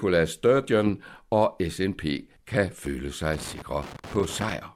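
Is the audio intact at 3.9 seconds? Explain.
No, 3.9 seconds falls right in the middle of a burst of loose connector crackle that runs from about 3.33 to 4.52 s, starting just after "kan føle". What's happening is a worn or dirty contact somewhere in the chain making and breaking over and over as it shifts, so the speech gets chopped up and any DC on the line turns into pops. You hear it as a ragged, irregular scratchy crackle over that stretch.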